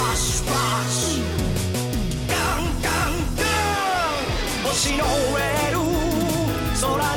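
No technical faults can be heard anywhere in the signal.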